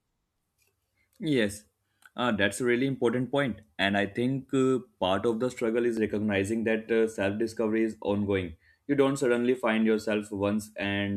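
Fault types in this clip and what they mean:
Overlap between stream segments: a tiny skip at 5.97 s, between "of the struggle is" and "recognizing that uh", where about 17 ms of speech vanishes. Two segments' timestamps overlapped, so the player trimmed real audio at the join, which fits 2-second segments.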